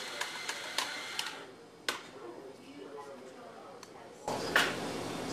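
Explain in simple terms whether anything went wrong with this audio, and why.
Something did go wrong near the end. At 4.28 s the whole recording abruptly becomes much louder and stays that way until the clip ends. This is a sudden gain jump, likely caused by a volume setting being changed instantly instead of gradually. Unlike a louder sound simply starting, the background noise jumps up at exactly the same moment. Unlike an automatic level control, there is no smooth rise; the change happens all at once.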